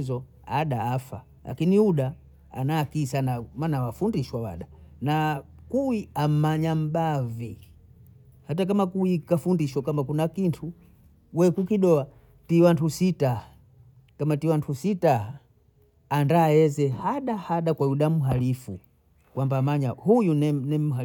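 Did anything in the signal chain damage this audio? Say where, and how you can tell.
No, nothing along the way seems to have hurt this speech recording; there's no point at which a stage of the chain leaves its mark on the sound.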